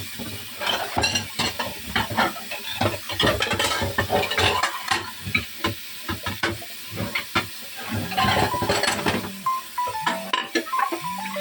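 A recording of everyday sounds, with nothing technically wrong with it.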